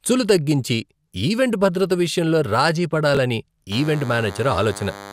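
At 3.15 to 3.17 s, just after "ఈవెంట్ భద్రత విషయంలో రాజీ", chunks arrive out of order: one block of about 5.3 ms plays three blocks late, giving a brief jumbled flutter. The waveform shows three abrupt discontinuities there, and the spectrogram shows thin vertical broadband lines.

From 3.72 s to the end, a DECT cordless phone buzz sits roughly 15 dB below the speech. Radio bursts every 10 ms are rectified into a thin, steady 100 Hz buzz. The spectrogram shows evenly spaced horizontal harmonic lines, and the waveform shows a regular 10 ms pulse train.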